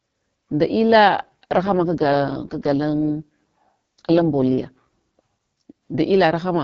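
An AMR rate drop runs from 1.18 to 4.79 s, just after "nda illa": the speech turns rough, raspy and synthetic with no gap or narrowing of the band, which fits the wideband coder stepping down from 12.65 to 6.6 kbit/s before recovering.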